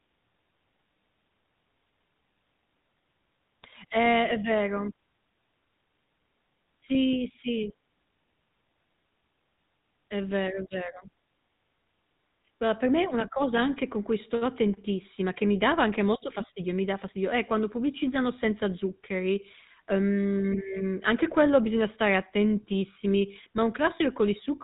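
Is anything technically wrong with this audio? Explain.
Yes. Throughout the speech, GSM full-rate codec damage is plainly audible. The codec models the vocal tract and excites it with sparse regular pulses, which gives a buzzy, gravelly roughness that fits a 13 kbps GSM stream. Plain telephone band-limiting would only dull the sound, without this grain.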